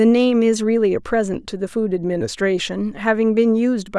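No technical faults can be heard in this recording of speech. Nothing in the signal calls for comment at any point.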